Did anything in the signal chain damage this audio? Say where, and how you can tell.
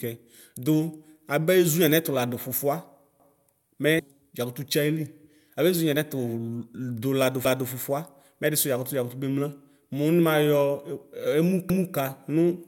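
Yes. Buffer stage: overlapping chunks, each 4 s block starting 250 ms early, replay a stutter at 3.20 s (after "ladʋ fʋfʋa"), 7.45 s and 11.70 s.

Codec stage: damaged data in a compressed stream at 3.98 s makes the decoder lose frame sync, giving a brief blip.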